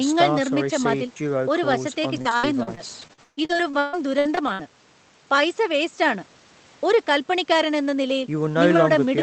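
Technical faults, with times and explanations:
1.71–4.61 s, repeated packet loss (robotic sound): choppy speech, as sixteen dropouts of up to 139 ms each are patched by extending the preceding sound.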